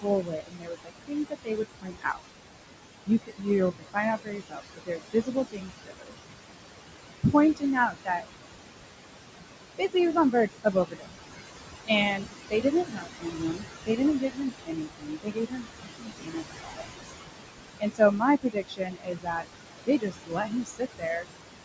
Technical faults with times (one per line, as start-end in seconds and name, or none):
0.00-21.64 noise suppressor artifacts
0.01-2.21 speech cut by the noise suppressor
3.06-3.47 speech cut by the noise suppressor
3.79-6.35 speech cut by the noise suppressor
7.23-8.25 speech cut by the noise suppressor
9.78-11.39 speech cut by the noise suppressor
11.87-17.19 speech cut by the noise suppressor
17.80-19.48 speech cut by the noise suppressor
19.86-21.27 speech cut by the noise suppressor